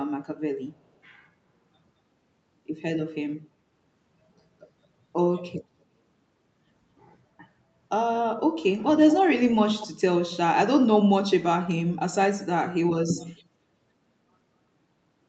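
Echo leak at 9.8 to 9.87 s in this speech: a brief, faint copy of the talker returns 225 ms late, about 15 dB below the direct voice. The likely cause is a far-end loudspeaker whose echo canceller let a scrap of microphone pickup through, over a call path limited to 8 kHz.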